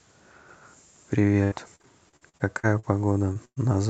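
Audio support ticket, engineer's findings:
Repeated packet loss (robotic sound), 1.21 to 3.58 s: choppy speech with pieces missing from 11 holes, longest 0.11 s, about a fifth of the stretch concealed. The jitter buffer is extending the last sound across each gap. Unlike a single dropout, the holes recur, and the top is already band-limited at 8 kHz by the Opus call path.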